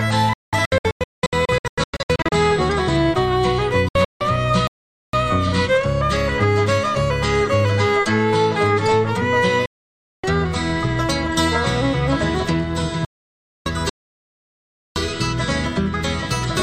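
Digital broadcast dropout from 0.33 to 2.32 s: the receiver repeatedly lost good frames and muted, so the sound breaks into short holes totalling about 1.15 s, the longest run 192 ms. Each cut fades in about 3 ms, which fits a decoder muting whole frames of roughly 32 ms. Another patch from 3.88 to 4.21 s loses 224 ms, with the longest run 160 ms.

Playback stall from 4.67 to 5.13 s: the output goes silent for 460 ms in mid-flow, then continues, likely because the player ran short of data or its thread was blocked.

Digital broadcast dropout returns as two solid gaps, 576 ms from 9.66 to 10.24 s and 608 ms from 13.05 to 13.66 s, each muted with the same 3 ms fade. The programme resumes later, and the sound from those spans is gone.

Playback stall from 13.89 to 14.96 s: a longer freeze of 1.07 s in which the output stops dead before resuming.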